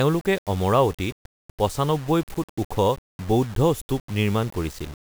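The speech in this clip was most likely reduced to low bit depth without dither, rounded to something that fits about 6 bits with no noise added to decorrelate the error. Because the rounding error tracks the waveform, it sits only around 25 dB below the signal and changes with it throughout. The result is a grainy, gritty distortion that roughens quieter syllables, while the faintest passages break up, sputtering between a couple of steps or dropping out to silence.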